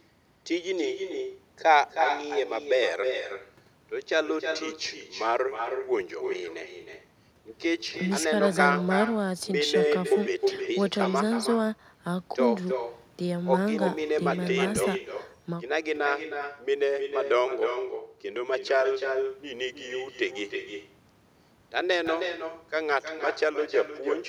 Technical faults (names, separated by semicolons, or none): echo with no canceller